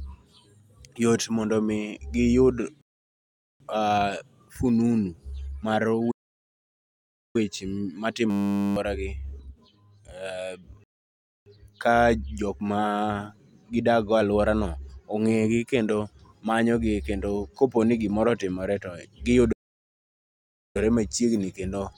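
Rebuffering stall at 2.81 to 3.60 s: the speech drops to silence for about 0.79 s while more audio downloads, then resumes exactly where it stopped, adding time without losing any.

Playback stall at 6.11 to 7.36 s: the speech halts mid-flow for about 1.23 s, likely because the player ran short of data or its thread was blocked, before carrying on.

System hang loop at 8.30 to 8.76 s: a 10 ms slice of audio repeats 46 times at 100 Hz, giving a steady buzz while the system freezes. Roughly half a second of speech is lost.

Rebuffering stall at 10.84 to 11.46 s: another silent gap of about 0.62 s, after which the speech picks up seamlessly where it paused.

Playback stall at 19.52 to 20.77 s: the output goes silent for about 1.23 s, and the speech resumes with "machiegni kendo yot mondo".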